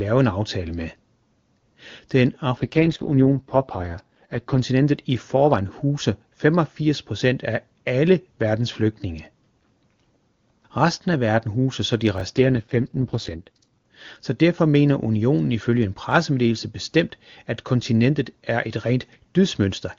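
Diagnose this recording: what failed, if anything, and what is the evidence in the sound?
AMR rate drop, network stage. From 2.57 to 4.61 s, before "i forvejen huser", and 12.36 to 13.86 s, the speech turns rough and synthetic. The link forced AMR-WB down from 23.85 to 6.6 kbit/s.

Chunks out of order, buffer stage. At 12.18 to 12.21 s, after "verden huser så de", a brief jumbled moment. A 10 ms chunk played two chunks late, creating hard joins.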